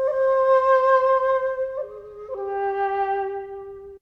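No technical faults are audible.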